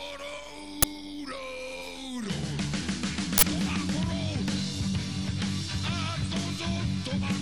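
Uninitialised buffers were played before any audio filled them, so stale memory came out as a loud crack at 0.82 s (fits 512 samples) and a burst of digital noise at 3.38 to 3.43 s (fits 2048).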